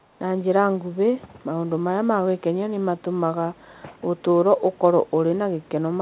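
From 0 to 0.19 s, a very faint echo leak trails the speech by 454 ms, likely an echo canceller letting the far-end loudspeaker through. On a spectrogram it shows as a weak, delayed copy of the speech pattern, cut off at 4 kHz like the rest of the call audio.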